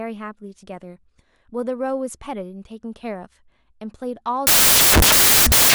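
From 4.47 s to the end of the clip, the playback path assembles each sample from the wrong bytes, so the rapidly varying low-order bits end up dominating every value. The speech gives way to loud, harsh broadband noise.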